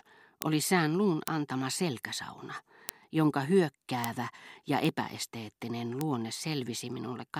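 Bit error spikes occur at 0.42, 1.28, 2.89 and 4.04 s (about -4 dBFS), 4.85 s (about -16 dBFS) and 6.01 s (about -10 dBFS). Each is a single flipped-bit sample, heard as a sharp tick unrelated to the speech. On the waveform each is a one-sample needle, and on a spectrogram a thin full-band vertical line.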